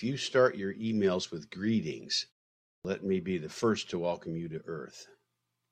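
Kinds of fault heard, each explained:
Clipped start after a pause: after about 0.57 s of silence the output path has idled and must resume, so roughly 38 ms of speech at 2.81 s is lost and the sound starts abruptly, missing its first sounds.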